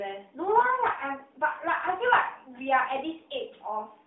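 From 0.60 to 0.67 s the speech briefly turns hoarse and scratchy, with a gargly roughness, while its pitch and loudness stay roughly in place. These are AMR bit errors: the span fits about three 20 ms codec frames whose less protected bits arrived corrupted, around one bit in twenty, yet still passed the check on the key bits. The decoder then placed its excitation pulses wrongly and misread fine pitch, gain and spectral detail, all within the 200 Hz to 3.7 kHz narrowband AMR line.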